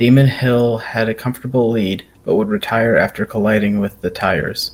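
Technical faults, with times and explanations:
No technical faults are audible anywhere in the speech.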